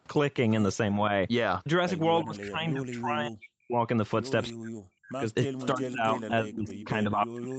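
From 2.23 to 3.82 s the speech gets pushed way down, by as much as about 40 dB, in patches that add up to around a second and a half. The same thing comes back from 4.49 to 5.26 s and again from 5.47 s right through to the end. That's speech suppressed in double talk, and the likely cause is the far end talking at the same moment. The echo canceller couldn't tell this talker apart from its own loudspeaker echo, so it ducked everything and left the voice dipping and breaking up.

Inside that last stretch there are two short scraps of echo leak, at 5.60 to 5.66 s and at 6.51 to 6.85 s. Each is a faint copy of the speech trailing about 315 ms behind, sitting roughly 20 dB under the voice. It's likely a speakerphone on one side whose canceller let some of its microphone pickup through and sent it back.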